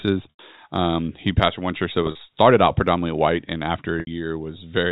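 At 0.30 to 0.39 s, 2.03 to 2.19 s and 4.00 to 4.07 s, packet loss with pitch repetition appears. The receiver bridges gaps of 90, 90 and 70 ms by looping the last pitch period, which fades into silence on the first and last gaps before speech returns with a short cross-fade. The middle loss is scattered across 160 ms in runs no longer than 40 ms, giving a brief buzzy hold. All of this sits within the G.711 telephone band below 4 kHz.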